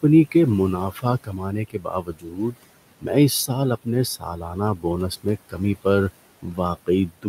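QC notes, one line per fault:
Throughout: noise suppressor artifacts. The steady room noise, sitting about 19 dB under the speech, is pulled down by about 17 dB whenever the suppressor judges a band to be noise. Because that decision is made frame by frame and band by band, the residual background dips in the gaps and swells back under the speech.
0.91–2.56 s, 4.19–4.85 s, 5.17–5.86 s, 6.42 s to end: speech cut by the noise suppressor. In these spans the suppressor mistakes quiet speech energy for noise and attenuates it along with the background, by about 18, 16, 15 and 19 dB at the deepest. The first span loses roughly a second of material in total, the one just after "اس سال اپنے" about half a second, the third a couple of hundred milliseconds. The affected parts sound swallowed and faint.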